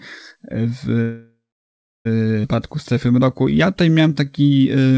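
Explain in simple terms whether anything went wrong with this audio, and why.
Three things go wrong in this speech clip, one after another.

First there's a call audio freeze from 1.02 to 2.07 s. The sound stalls, trails off into a fading buzz or hiss, and then goes fully silent for about 0.68 s before picking up right where it stopped. That pattern points to packets likely getting held up on the network, which let the receiver's jitter buffer run dry. Nothing is actually lost here. The speech just gets pushed back by about a second.

Right after that, at 2.43 to 2.46 s, there's a skip ahead. Playback jumps forward almost seamlessly, but roughly 0.7 s of speech is gone, and the two sides are stitched together nearly directly. A stretch of audio was dropped while later audio was already waiting.

Then from 2.56 to 4.93 s you get a jitter buffer slow-down. The speech plays at about 89% speed while keeping the same pitch, so sounds come out a bit stretched and drawn-out. 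The receiver repeated tiny slices of the waveform over and over, adding about 0.27 s in total, to rebuild its safety reserve.

All of this came through a regular call connection, which also trims everything above 8 kHz.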